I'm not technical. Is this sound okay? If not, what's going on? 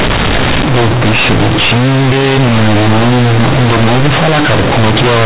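No, it isn't. The whole clip, from start to finish, is hit by companded audio read as linear. The speech was stored in A-law, the compact telephone format that squeezes loud and quiet parts onto one scale, but the player treats those bytes as ordinary 8-bit samples without unsqueezing them. So quiet moments come out as loud as shouted ones, and everything sounds harsh, buzzy and distorted, with heavy noise filling the pauses.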